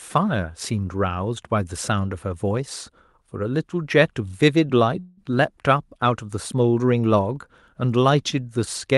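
A call audio freeze runs from 4.99 to 5.31 s. The last sound stretches into a fading buzz for about 177 ms, likely because packets arrived late and the jitter buffer ran dry. The speech then resumes where it stopped, delayed rather than lost.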